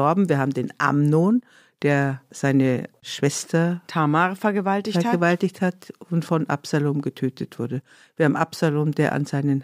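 A speech recording with nothing technically wrong that can be heard anywhere in it.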